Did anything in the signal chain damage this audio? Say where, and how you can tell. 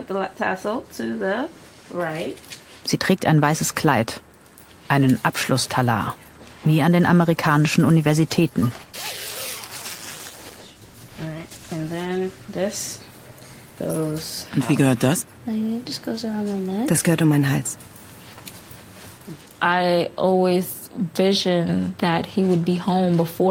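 Yes. From 7.11 s to 12.99 s the audio turns coarser and rougher, holding that degraded texture for about 5.8 s before clearing. This is a call bitrate drop: the codec, starved by a falling bandwidth estimate, coded more crudely, consistent with a fall from roughly 32 to 18 kbps.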